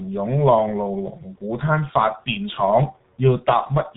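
Right through the clip the speech carries heavy G.723.1 codec damage: nothing above 4 kHz, a slow-updating voice model, hoarse muffled tone and smeared consonants, consistent with roughly 6 kbit/s.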